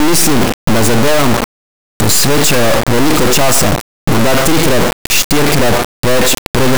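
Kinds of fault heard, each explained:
Integer read as float: the speech was stored as 32-bit integers but decoded as 32-bit floats, so sample values land near zero or far past full scale, giving a harsh buzzing square wave throughout. The waveform slams between silence and the clipping rails, while a spectrogram shows dense broadband energy with strong harmonic streaks.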